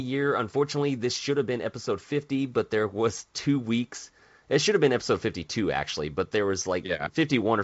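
Listening to this speech, carried over G.722 wideband telephone coding at 64 kbit/s with nothing above about 7.7 kHz, nothing stood out.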